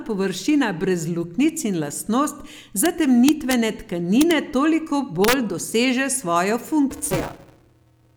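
At 2.86 s, from 3.29 to 3.53 s, 4.21 to 4.31 s and 5.24 to 5.33 s, integer overflow wraps speech peaks that exceed full scale by up to about 3 dB to the opposite sign. Each is a violent crack, sharper than clipping. The waveform shows peaks flipping rail to rail, and the spectrogram shows vertical broadband streaks.

From 6.91 s to the end, buffer tearing sets in. Writer and reader pointers cross inside every period, so roughly half of each buffer replays audio about 10 ms old. This gives a robotic 200 Hz buzz, which fits a 5 ms period. The spectrogram shows harmonic comb lines, and the waveform shows regular hard splices.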